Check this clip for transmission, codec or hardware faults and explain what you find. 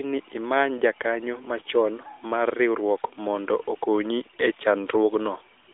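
There's one fault here, right at the tail of the speech: AMR comfort noise, riding on a narrowband mobile link whose light coding damage sounds consistent with AMR-NB at its top rate, around 12.2 kbps.

From 5.64 to 5.68 s, and again from 5.72 s to the end, the phone decided nobody was talking and stopped sending speech frames. The receiver patched those gaps with synthetic noise built from a rough level and spectrum sketch, so the real background drops out and a smooth, steady hiss flicks in for about 40 ms, then about 25 ms.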